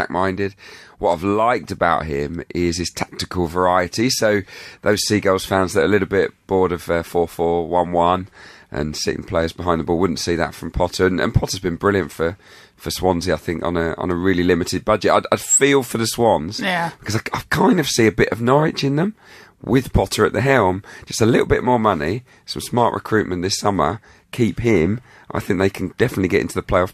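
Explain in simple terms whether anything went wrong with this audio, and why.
Nothing went wrong with this speech recording. At no moment does any technical problem interrupt or alter the sound.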